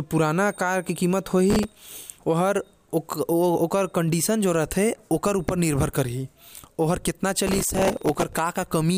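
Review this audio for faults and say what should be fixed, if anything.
Processor overload crackle occurs from 1.50 to 2.17 s and from 7.47 to 8.39 s. Dozens of very short buffers, roughly a millisecond or two each, miss their deadlines and replay stale audio with hard edges, producing gritty tearing over the speech. Unlike clipping, it doesn't follow loudness. It comes and goes with processing load. To prevent it, use a larger audio buffer or lighten the processing load during playback and recording.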